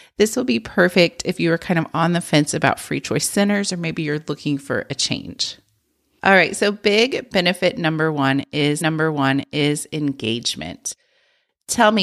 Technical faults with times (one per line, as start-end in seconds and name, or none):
8.80-9.80 stream segment repeated